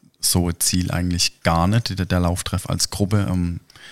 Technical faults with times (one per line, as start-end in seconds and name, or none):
none